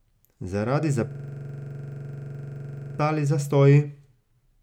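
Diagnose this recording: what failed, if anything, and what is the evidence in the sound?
A system hang loop at the driver or buffer stage, from 1.11 to 2.99 s: one 43 ms slice of speech repeats exactly at 23.4 Hz, a rattling buzz that fits a 2048-sample ring buffer replayed while the host froze. About two seconds of speech are lost. Unlike a dropout, the gap is filled with identical repeats rather than silence.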